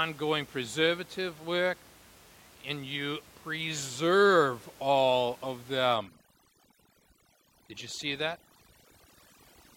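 From about 5.95 s, right after "you preserve all of", overdone noise removal kicks in: an aggressive denoiser strips bands near its noise estimate, leaving a lowered background that breaks into twinkling, warbling specks to the end.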